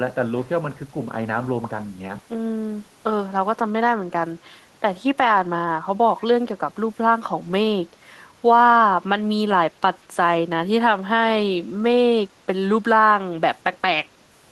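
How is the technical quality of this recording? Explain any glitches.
The recording has one brief glitch, an echo leak from 6.2 to 6.24 s. For about 40 ms, a very faint copy of the speech returns roughly 178 ms after the original, well below the direct signal. This is likely because the far end played the call through a loudspeaker and its echo canceller briefly failed to subtract what its microphone picked up, sending that residue back. Unlike room reverberation, which trails smoothly behind every sound, this is a short, detached repeat arriving at a fixed delay.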